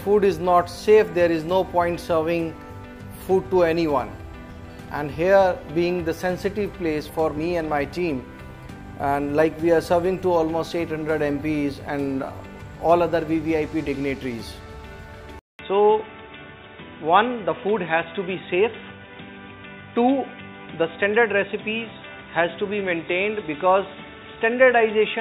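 At 15.4 s a 200 ms gap opens, and the rest of the audio is cut off above 3.8 kHz and carries a faint new background noise at an unchanged level. This is likely an input switched to a poorer device: the silence and the new noise floor mark a change of microphone rather than a filter or codec bandwidth drop.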